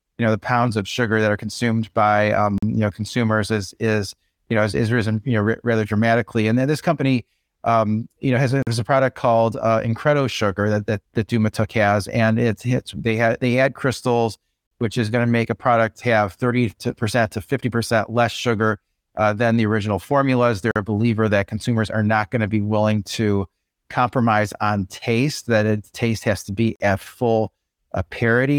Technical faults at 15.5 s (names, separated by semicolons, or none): none